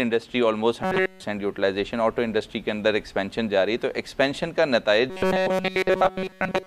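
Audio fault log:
0.83–1.23 s and 5.1 s to the end: robotic sound from repeated short buffers. The sound collapses into a rigid metallic buzz fixed at 188 Hz, likely because a roughly 5.3 ms chunk is looped in place of the missing audio. Unlike a dropout, it never goes silent.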